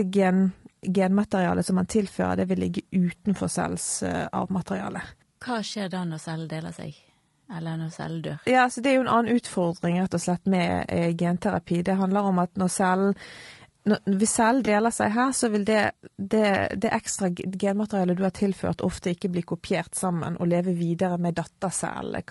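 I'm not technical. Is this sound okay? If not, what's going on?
No. The speech was likely squeezed by low-delay AAC compression, the kind used in video calls, which leaves voices rough and grainy with a thin, artificial-sounding top end.

At about 14.65 to 14.68 s, just after "hvis cellen", one piece of audio went missing. This AAC frame loss was patched over by the decoder, leaving a brief smeared, noisy blip.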